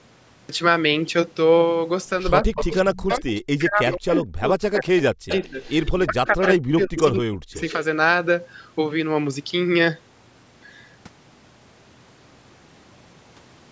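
The clip opens with a cut-off start. Recording began late, so the first 0.49 s is digital silence, and the speech enters abruptly at 0.49 s in mid-sound, with no natural attack or fade-in.

From 2.42 to 5.56 s and again from 5.99 to 7.56 s, the talker's speech dips by up to about 40 dB, for roughly two seconds and one and a half seconds respectively. This is likely speech suppressed in double talk: with both sides talking, the echo canceller treated the near voice as echo and pulled it down.

An echo leak runs alongside, at 2.56–2.98 s, 3.88–4.2 s, 4.74–5.92 s, 6.43–6.47 s and 7.54–7.73 s. A copy of the voice trails by 168 ms, about 10 to 15 dB below the speech and about 25 dB down in the last scrap. This is likely a loudspeaker echo the canceller failed to remove. Throughout, the audio stops at 8 kHz, consistent with normal call microphone processing.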